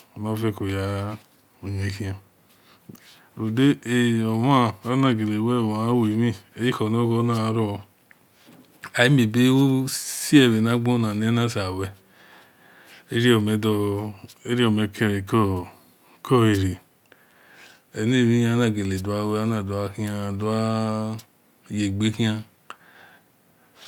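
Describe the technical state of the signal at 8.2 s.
At 8.2 s the speech signal is intact, with no dropout, clipping, glitch or other technical fault.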